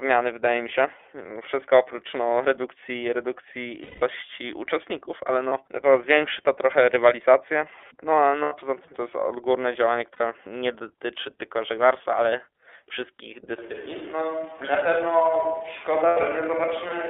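Speech carried over an iLBC codec path, with the band limited to roughly 300 Hz to 3.5 kHz, so nothing of the upper voice spectrum survives. The codec damage is plainly audible as a rough, slightly synthetic texture, the result of each 30 ms frame's excitation being coded on its own without support from the previous frame, which points to the 13.33 kbps mode. Lost iLBC frames appear at 3.83–4.03 s, 5.49–5.52 s, 8.42–8.55 s, 10.13–10.21 s and 16.08–16.18 s. In each gap the decoder repeats the last pitch cycle mixed with noise, so the missing stretch comes out as a held, faintly buzzy vowel. The longest gap, about 180 ms at 3.83 s, fits six consecutive 30 ms frames and fades as it goes on. The shortest, at 5.49 s, fits a single 30 ms frame. Because the frames are independent, the voice is correct again almost immediately after each gap.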